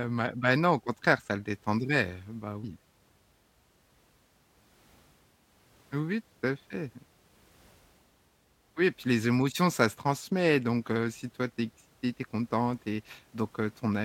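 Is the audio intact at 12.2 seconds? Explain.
Yes, the speech at 12.2 seconds is intact, with no dropout, click, distortion or other fault at that moment.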